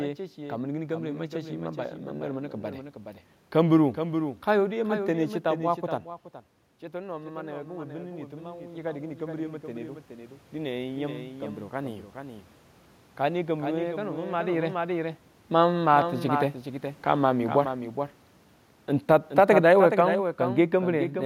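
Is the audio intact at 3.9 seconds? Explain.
No. A doubled audio track runs through the whole clip: a second copy about 10 dB quieter trails roughly 0.4 s behind, likely from a slower second capture path.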